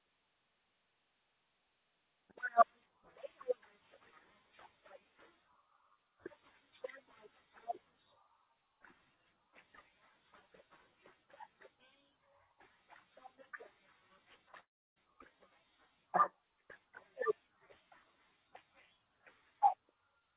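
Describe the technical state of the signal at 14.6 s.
At 14.6 s the speech cuts into a gap that runs to about 14.98 s, and it sounds like a long network dropout is the likely cause. Roughly 360 ms of audio never arrives. The receiver stretches the last bit of sound into a short fading buzz or hiss, which dies to silence for most of the gap. When the speech returns, the missing stretch is simply gone. The surrounding audio is band-limited to 4 kHz by the G.711 call codec.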